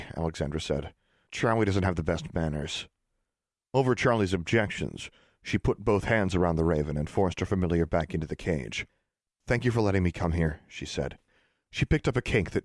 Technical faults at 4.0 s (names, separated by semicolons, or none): none